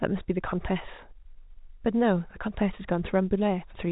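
No technical faults can be heard in this speech.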